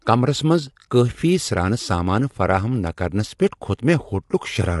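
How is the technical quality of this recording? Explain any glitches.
The recording is compromised by audible codec damage that runs through the entire clip. Throughout, the speech sounds rough and grainy, with noise filling the gaps between harmonics and nothing above about 11.6 kHz. This is likely low-delay AAC compression (AAC-ELD), with a bitrate that fits around 32 kbps. Its short frames resolve voice harmonics coarsely and spend bits inefficiently, so at this rate the encoder smears the harmonic structure and truncates the top band.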